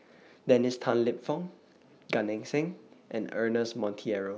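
Nothing here trips up the ear, since no technical faults turn up anywhere in the recording.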